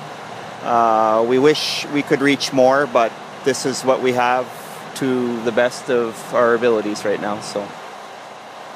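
Nothing stood out as a fault on listening to the clip.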